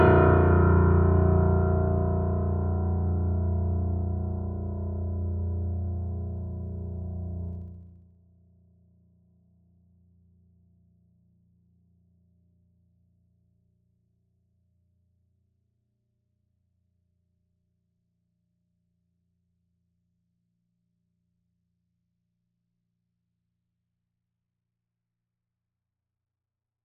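From 7.49 to 8.17 s the music drops in level by roughly 25 dB, and the fade carries zipper noise: a fine ticking rides on the sound for the whole move. The gain is being changed in 1 dB steps, about fifty times a second, with no smoothing between them, so each step leaves a small click in the waveform.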